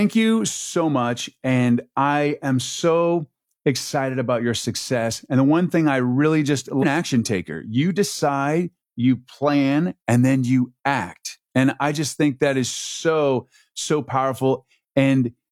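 At about 6.78 to 6.84 s the speech suddenly jumps forward, with a short blip at the join, as if part of the talk had been cut out and the two sides butted together. That points to a stream segment skipped, likely: one chunk of the segmented stream didn't load in time, so the player dropped it and carried straight on with the next one. Whatever was in that chunk is simply gone.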